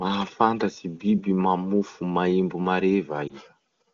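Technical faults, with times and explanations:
3.27 to 3.36 s, lost AMR speech frames: a radio error corrupted speech data, and the brief dip or warble fits a single lost 20 ms frame. The AMR-WB decoder repeated the previous pitch and vocal tract settings at lowered gain, then recovered.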